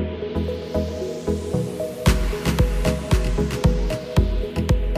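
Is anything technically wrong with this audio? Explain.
Yes. From about 0.36 s to the end there's sample clock jitter: the converter's clock is wobbling, on the order of 10 microseconds, so each sample lands a bit early or late. How far off it ends up depends on how fast the waveform is changing, so the error rides along with the sound at roughly 30 dB below it. You hear it as a grainy hiss or roughness that gets worse on loud, bright passages.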